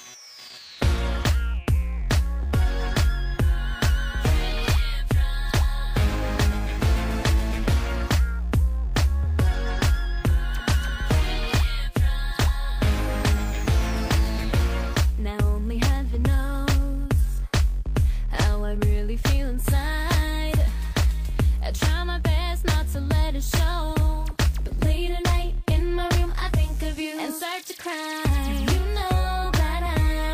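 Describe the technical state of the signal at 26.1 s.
At 26.1 s the signal is intact, with no technical fault audible at that moment.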